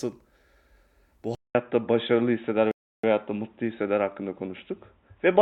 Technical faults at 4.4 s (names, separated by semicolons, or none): input switched to a poorer device